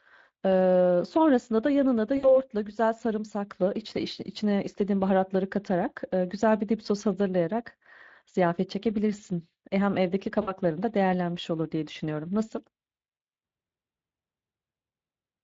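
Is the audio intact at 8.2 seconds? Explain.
No, 8.2 s falls within Speex codec damage that runs through the whole clip. With too few bits for the excitation, the speech turns noisy and hoarse. A spectrogram shows blurred harmonics with grainy noise between them, which fits a bitrate of around 20 kbps.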